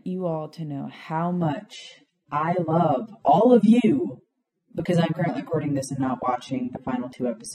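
Speech, and right after "all to know how" at about 1.42 s it drops to an adaptive stream at a lower bitrate until the end. The switch is sudden with no gap, the treble goes thin with nothing above 13.5 kHz, which fits a drop from roughly 96 to 24 kbit/s AAC after the connection slowed.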